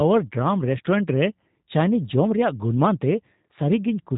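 Throughout, the speech carries G.729 codec damage: it is rebuilt from a vocal tract model and sparse pulses, so it sounds rough and synthetic, fitting an 8 kbit/s stream, and nothing passes above 3.8 kHz. Unlike a plain low-pass filter, it adds buzzy, artificial texture.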